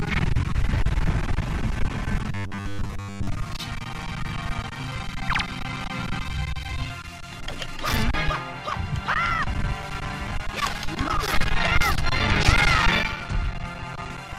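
Robotic sound from repeated short buffers runs from 2.32 to 3.28 s. The audio turns into a rigid, metallic buzz at 100 Hz, which only loosely tracks the underlying sound. The likely cause is new audio arriving too seldom, so the playback side filled the gaps by looping the last 10 ms or so over and over. Roughly two-thirds or more of that stretch is repeated material rather than fresh audio, and the genuine content in between is skipped.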